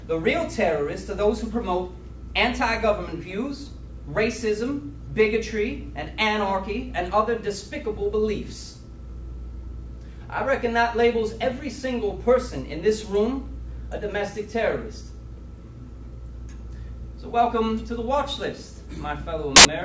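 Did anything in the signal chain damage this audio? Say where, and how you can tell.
Yes: a hard-edged burst of very loud white noise from 19.56 to 19.65 s is file tags played as audio, where an embedded cover picture's compressed bytes were decoded as samples.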